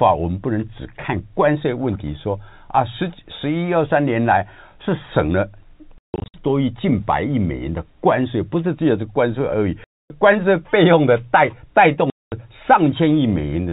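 Packet loss filled with silence cuts the speech at 5.98–6.34 s (scattered gaps, longest 160 ms), 9.84–10.1 s and 12.1–12.32 s. Gap lengths step in sizes that fit 20 ms packets. They are dead holes with hard edges, not the smeared or repeated sound of concealment.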